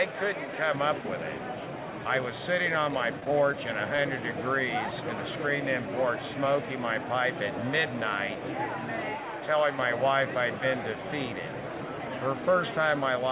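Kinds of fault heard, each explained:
Repeated packet loss (robotic sound): Between 3.20 and 3.54 s, audio arrives in broken fragments. Four separate gaps, the longest 14 ms, are each patched by stretching the preceding sound, so about 11% of that stretch is filled-in material. The patches follow each other closely enough to give a choppy texture. It is a cluster of holes across a third of a second, not a single isolated dropout.
Short concealed packet loss: At 3.97 s, roughly 10 ms of audio never arrived, and the receiver bridged the hole by extending the last sound before blending back into the real signal. It is heard as a tiny smear or wobble rather than a silence. Unlike the robotic stretch just before it, this is one brief, self-contained patch, so it lacks the repeated, stuttering character of the earlier run.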